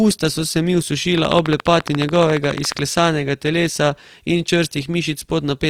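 Throughout this speech clip the sound has a noisy, rough, grainy texture, yet the top end stays open up to about 20.4 kHz and there is little of the swirling, hollowed-out warble that MP3 leaves. That points to Opus compression in its full-band music mode, likely at a low rate around 24 kbps, where the encoder keeps each band's energy but fills starved bands with folded or noise-like content instead of leaving holes. From 1.18 to 2.80 s a train of clicks rides over the audio: about twenty near-identical ticks, very loud against the speech, arriving at a steady 14.3 per second. They are clearly present in the gaps between sounds as well. The even spacing and repeated shape separate this from random crackle or a single dropout pop, and point to a likely cause such as interference from nearby equipment or a faulty connection or power supply injecting pulses.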